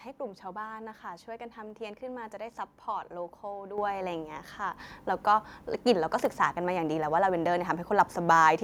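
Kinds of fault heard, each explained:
microphone volume stepped up: automatic input gain raised the microphone about 8 dB in one step near 3.78 s; waveform amplitude and spectrogram brightness jump together, background included.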